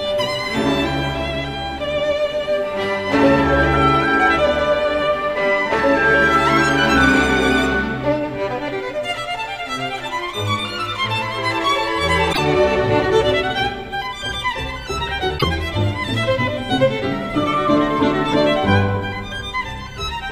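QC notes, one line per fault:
12.29–12.39 s and 15.35–15.44 s, damaged data in a compressed stream: two brief glitches of roughly a tenth of a second each, where corrupted bytes made the decoder misread its frames and lose sync until it found the next valid frame header.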